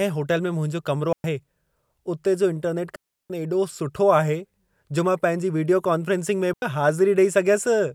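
At 1.13, 2.96 and 6.53 s the speech drops into clean near-silence for about 0.11, 0.34 and 0.09 s: digital wireless dropouts, the receiver muting on lost data, with no noise bursts.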